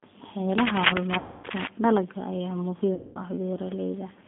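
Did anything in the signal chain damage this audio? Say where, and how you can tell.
Yes. The whole clip has a narrow, slightly rough and synthetic quality, with nothing below about 200 Hz or above 3.5 kHz. That points to the codec stage: G.729 (the G.729A variant) at 8 kbit/s. It rebuilds speech from a vocal-tract filter, a pitch predictor and a few pulses per 5 ms subframe rather than sending the waveform, so fine detail is replaced by a modelled approximation, and the damage is plainly audible.

At the network stage there are two gaps with VoIP packet loss concealed by the speech codec: 1.18 to 1.47 s and 2.95 to 3.23 s. In each, the speech is stretched into a buzzy tone or coloured noise that fades, and it stays weak or distorted briefly after audio returns. The missing spans of about 260 ms and 200 ms fit runs of 13 and 10 lost 20 ms packets. The decoder extrapolated from its last pitch and filter state with falling gain, and recovery lagged because each frame depends on the one before.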